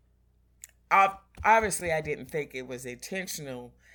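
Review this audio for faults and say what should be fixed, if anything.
At 1.79 to 1.81 s, just before "I didn't think it", the speech gives a brief jumbled moment. This is chunks out of order: one 10 ms chunk arrived or was written one chunk late, so it plays after the chunk that should follow it. No audio is missing, but the swapped order creates three hard joins around the scrambled moment. To prevent it, reorder chunks by sequence number or timestamp in a jitter buffer before writing or playback.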